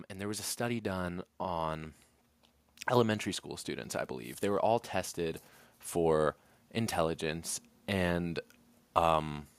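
From 0.14 to 2.02 s there is automatic gain rising. The gain control judged the input too quiet and raised it by about 6 dB over nearly two seconds, so speech and background swell together. The waveform envelope widens steadily, and the spectrogram brightens evenly across all frequencies.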